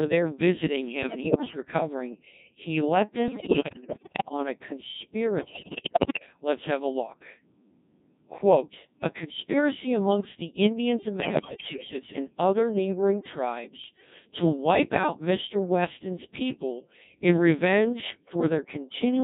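The speech has passed through a Codec 2 vocoder. Instead of the waveform, it carries only pitch, voicing, energy and a spectral envelope, and rebuilds the voice from sine waves. The heavy damage points to a rate near 1.6 kbit/s and leaves the whole clip robotic and buzzy.

Bit errors on digital voice radio then corrupt the vocoder's frame parameters in five bursts: 1.01 to 1.62 s after "there visiting", 3.28 to 4.31 s between "he let" and "on a", 5.40 to 6.26 s, 11.20 to 11.93 s, and 13.84 to 14.10 s just before "to wipe out". In each burst, pitch, level and tone colour jump about, breaking into bleeps, warbles and gibberish. The burst at 5.40 s is the most broken and the one at 13.84 s the mildest.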